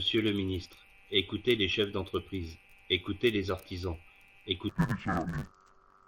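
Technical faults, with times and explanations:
4.69 to 6.07 s, interleaved audio read as planar: the speech turns dull and robotic with a 100 Hz buzz, because each 10 ms block of alternating left-right samples is split into halves.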